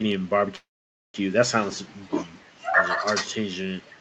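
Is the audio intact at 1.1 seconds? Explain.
No. A call audio freeze runs from 0.55 to 1.16 s, likely from packets stalling until the jitter buffer emptied. A brief fading buzz gives way to about 500 ms of silence, a flat waveform and blank spectrogram, so 1.1 s is silent. The audio then resumes about 590 ms late, with nothing lost.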